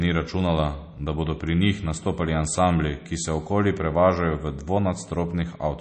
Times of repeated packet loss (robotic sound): none

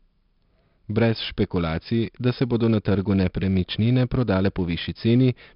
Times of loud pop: none

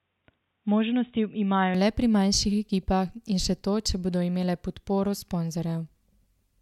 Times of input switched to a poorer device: 0.00-1.75

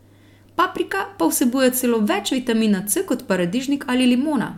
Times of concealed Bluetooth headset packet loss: none

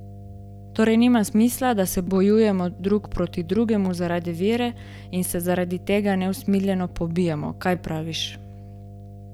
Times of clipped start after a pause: none

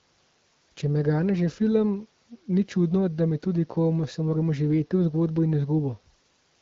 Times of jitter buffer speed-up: none

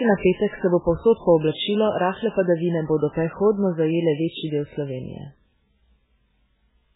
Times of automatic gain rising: none

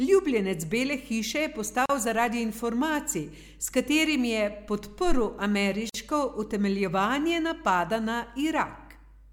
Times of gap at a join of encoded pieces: 1.86-1.89, 5.89-5.94

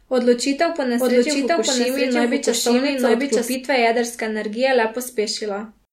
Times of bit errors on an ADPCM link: none

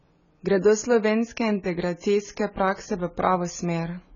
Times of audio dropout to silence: none

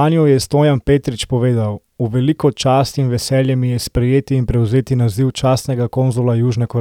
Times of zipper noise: none

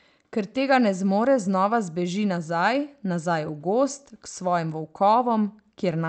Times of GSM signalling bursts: none

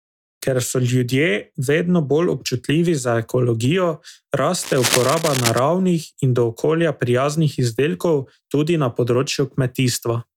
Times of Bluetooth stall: none

